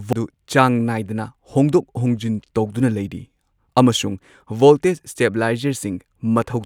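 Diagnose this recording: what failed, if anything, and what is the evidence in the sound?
The fault sits at the codec stage: damaged data in the compressed stream near 0.13 s. Corrupted bytes there leave the decoder misreading a frame and losing sync until it finds the next valid header, and that brief failure is heard as a short chirp or blip early in the speech.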